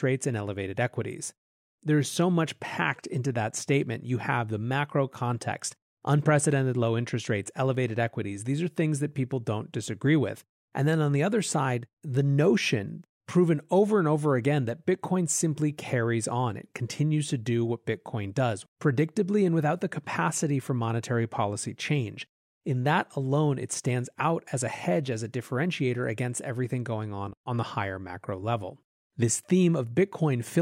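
No technical faults are audible.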